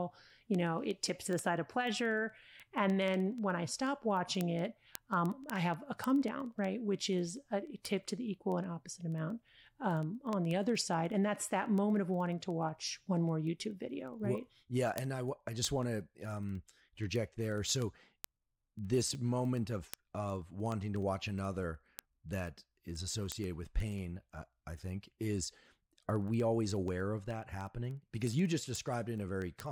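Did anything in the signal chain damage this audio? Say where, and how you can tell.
Yes, word clock ticks at the digital interface. From 0.12 s to 29.66 s there's a steady train of sharp ticks of uneven strength, roughly every 70 ms, hundreds in all. The receiver's free-running clock is off by a few hundred ppm, so each slip drops or repeats a sample.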